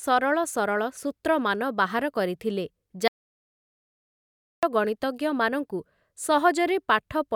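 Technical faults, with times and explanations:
3.08 to 4.63 s, audio dropout to silence: the speech cuts off mid-flow and returns 1.55 s later, with no room tone in the gap. The input was likely lost while silence kept being written, leaving a flat waveform and an empty spectrogram band.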